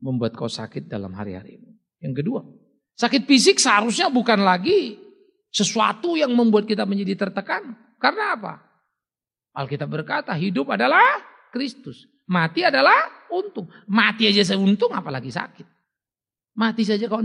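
From 0.11 s to 17.07 s, faint clock slip clicks tick roughly every half second, about thirty in all, likely from two unsynchronised clocks differing by around 40 ppm, each slip dropping or repeating one sample. A spectrogram shows evenly spaced thin vertical lines; the waveform shows tiny steps.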